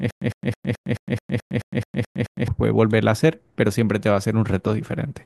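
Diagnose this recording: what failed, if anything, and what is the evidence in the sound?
From the very start to 2.48 s the speech has a stutter with silent gaps: the same 107 ms burst repeats eleven times, each followed by about 109 ms of digital silence, every 216 ms. The likely cause is a stalled playback or stream buffer that replays its last fragment on each retry and then runs dry. Unlike a plain dropout, the audio repeats, and unlike a gapless loop, true silence separates each repeat.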